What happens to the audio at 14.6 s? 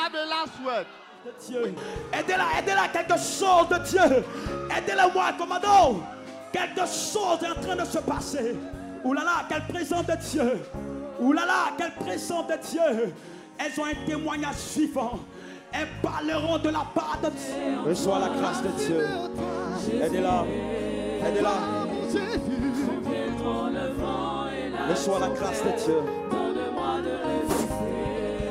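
Nothing goes wrong at 14.6 s; the audio plays through that moment without any dropout, glitch or other fault.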